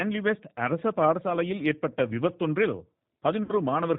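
A speech clip carried over a G.729 codec, whose rough, synthetic quality and absence of anything above 4 kHz fit a low-rate 8 kbit/s VoIP link. VoIP packet loss concealed by the speech codec occurs from 3.43 to 3.54 s: the decoder extrapolates about 60 ms of missing audio, which fits two lost packets, into a fading buzzy tone or coloured noise, and the sound stays weak or distorted as it recovers.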